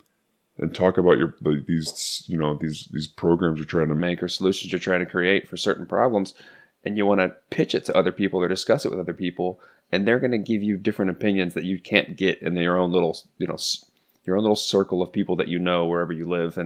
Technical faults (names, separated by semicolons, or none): section at the wrong speed